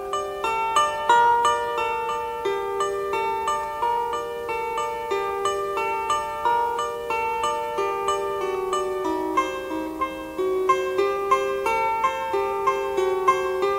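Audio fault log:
Throughout: mains hum, a steady 60 Hz tone roughly 35 dB below the sound, from a ground loop or nearby transformer leaking power-line current into the signal. A spectrogram shows an unbroken horizontal line at 60 Hz, and the waveform shows a regular low ripple in quiet gaps.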